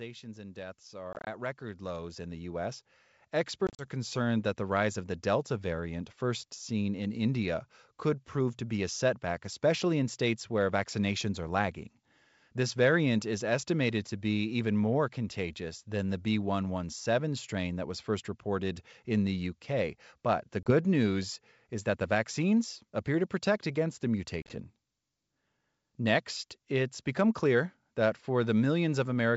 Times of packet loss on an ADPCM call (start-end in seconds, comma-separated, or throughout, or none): 1.13-1.28, 3.67-3.86, 20.63-20.71, 24.42-24.60